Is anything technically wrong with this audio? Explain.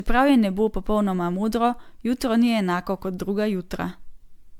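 Yes. Throughout, the speech sounds swirly, hollow and smeared, with blurred attacks, likely generation loss: around ten MP3 passes, each requantising on shifted frames. A single encode at 128 kbit/s wouldn't sound this degraded.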